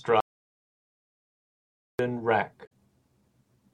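At 0.20 s the speech cuts off abruptly and the track falls to silence until 1.99 s, so roughly 1.79 s of material is gone. This is an audio dropout to silence, likely caused by the input signal being lost while the recorder kept writing silence. What separates it from a quiet pause or a gate closing is the complete absence of room tone: there is no hiss or ambience in the gap, and the speech resumes mid-flow rather than fading back in.

From 2.63 to 2.72 s there is a brief glitch, about 90 ms long, that interrupts the speech. This comes from damaged data in a compressed stream. Corrupt bytes made the decoder misread those frames, and it lost sync until it found the next valid frame header. Unlike the dropout, it is far shorter, and it is a decoding fault rather than a lost input.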